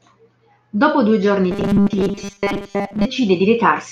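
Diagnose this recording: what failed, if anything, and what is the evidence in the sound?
From 1.51 s to 3.05 s the speech turns into a rigid metallic buzz fixed at 200 Hz, the robotic sound from repeated short buffers. This points to a driver or buffer underrun, likely starving playback so most of the audio is replaced by repeats of a 5 ms block.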